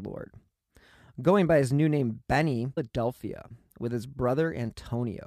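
Speech, with a single discontinuity at 2.77 s: the audio jumps abruptly forward, with a brief blip at the join, and the flow of speech does not continue smoothly across that point. The likely cause is a stream segment skipped, where one chunk of a segmented delivery failed to arrive or decode and the player resumed from the following segment, so the programme carries on from later material rather than from where it broke off.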